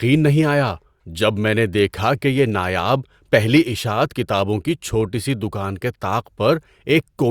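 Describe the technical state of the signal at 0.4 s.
The speech signal is intact at 0.4 s, with no audible technical fault at that moment.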